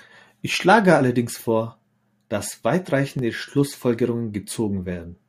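From 0.54 s to 4.52 s the speech carries a regular click about every 1.32 s, around four in all. This is the signature of clock drift buffer slips. The likely cause is two devices running on separate clocks that disagree by roughly 500 parts per million. The buffer between them slowly fills or drains until a few tens of samples are dropped or repeated, and each slip leaves a brief discontinuity in the waveform.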